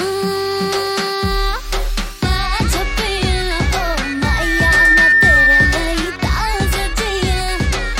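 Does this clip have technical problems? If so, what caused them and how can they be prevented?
Yes. A microphone picked up its own loudspeaker, causing loudspeaker feedback squeal from 3.88 to 6.05 s: a 1.8 kHz tone swells over about a second to roughly 10 dB above the sound. Prevent it by keeping microphones away from speakers and lowering gain or notching 1.8 kHz.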